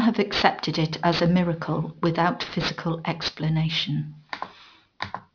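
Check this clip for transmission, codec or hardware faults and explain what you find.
Aliasing runs through the whole speech clip. The audio was downsampled without an anti-alias filter, which fits a new rate of about 11 kHz. Content above the 5.5 kHz fold point reflects back into the band at unrelated frequencies, sitting roughly 10 dB under the speech. Sibilants sound gritty and metallic.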